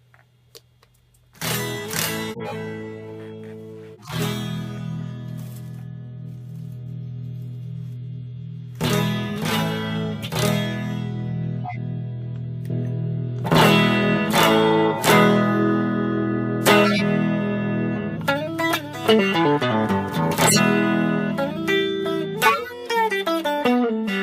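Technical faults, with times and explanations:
2.31–2.55 s, 3.93–4.17 s, 11.64–11.76 s and 22.46–22.73 s, corrupt frame decoded: in each of these spans, a few damaged compressed frames were decoded anyway. Misread codes and gains put energy at the wrong frequencies, so each span sounds like a chirp or burst of noise, and the last is the loudest. On a spectrogram each shows as a short, frame-aligned block of misplaced energy.
16.84–17.02 s and 20.46–20.59 s, compressed frames skipped: at each point, roughly 50 ms of audio is missing, so the sound jumps forward. The join is heard as a brief smeared blip or a click, depending on the codec. On the waveform it appears as an abrupt discontinuity, and on the spectrogram as a thin vertical seam.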